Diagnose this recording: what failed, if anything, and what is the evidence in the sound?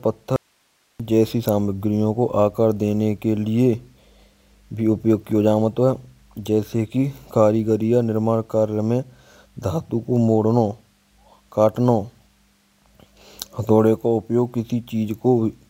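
The signal path likely broke upstream, probably an intermittent connection in the analogue wiring, while everything after the break stayed live. The result is an audio dropout to a faint residue: from 0.36 s to 1.00 s the speech cuts out abruptly for about 0.63 s, leaving only hiss roughly 45 dB below the signal. Both the cut and the return are sudden, unlike a natural pause or fade, and the steady hiss shows the downstream chain never went silent.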